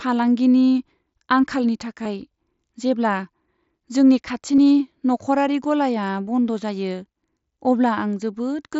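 At 2.04 s and again at 4.56 s, just before "नखरारि गलाया", the speech shows concealed Bluetooth headset packet loss. Audio between headset and phone went missing for about 15 ms and then 22.5 ms, which fits two and three lost packets, and the receiver filled each gap by repeating the best-matching recent stretch of waveform. Unlike a plain dropout, neither gap falls silent or clicks. Each is a brief buzzy smear at full level that blends into the mSBC-coded speech, with a faint warble as the real signal resumes.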